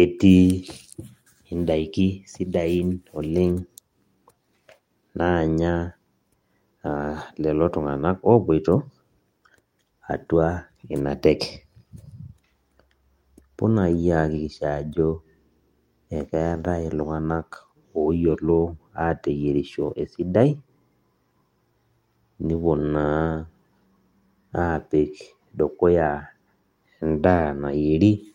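No technical faults can be heard anywhere in the speech. Nothing in the signal path draws attention at any point.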